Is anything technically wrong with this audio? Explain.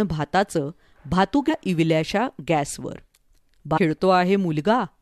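Yes. There is damaged data in the compressed stream, from 3.76 to 3.79 s. It lasts about 20 ms. At that point part of the encoded speech is corrupt. Some bytes were lost, zeroed or overwritten. The decoder cannot read those frames properly. It loses sync and hunts for the next valid frame header. The result is a short chirp or blip that cuts across the speech before normal decoding resumes.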